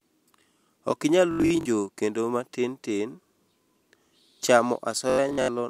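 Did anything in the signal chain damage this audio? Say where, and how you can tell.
Yes, a Bluetooth stutter: dropped packets made the receiver replay short slices, giving machine-gun buzzes at 1.31–1.66 s, just before "kendo matin", and 5.10–5.48 s, then skipping ahead.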